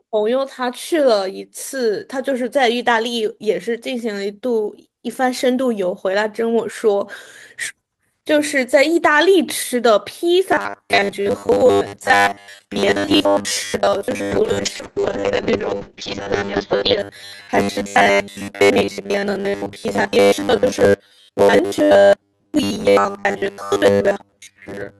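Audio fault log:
10.52 s to the end, robotic sound from repeated short buffers: the speech hardens into a rigid, metallic buzz fixed at 100 Hz, still loosely tracking the words. The likely cause is a 10 ms stretch being replayed whenever fresh audio arrives late, so around two thirds or more of the real audio is skipped. A spectrogram shows evenly spaced horizontal harmonics at multiples of 100 Hz, and the waveform shows identical 10 ms cycles repeating.
14.33 s to 17.05 s, call bitrate drop: within the robotic section the sound turns rougher, watery and muffled. The audio bandwidth narrows from 20 kHz to 8 kHz, which fits the encoder being pushed from about 32 kbps to about 6 kbps and holding that floor for about 2.7 s. On a spectrogram, everything above 8 kHz is abruptly cut off, with smeared, blocky texture below. The upper band returns at 17.05 s.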